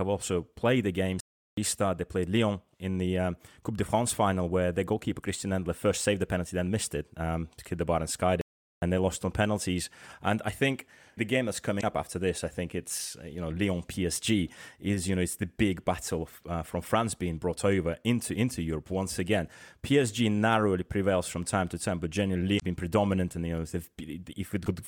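Playback stalls at 1.20–1.57 s and 8.41–8.82 s cut the speech off mid-flow for about 0.37 s and 0.41 s of silence. The likely cause is the player running short of data or having its thread blocked, so output halted until it recovered.

Damaged data in a compressed stream appears at 11.77–11.84 s, 22.56–22.63 s and 24.62–24.67 s as brief chirps or blips. Corrupted frames there were misread by the decoder, which lost sync and searched for the next valid frame header.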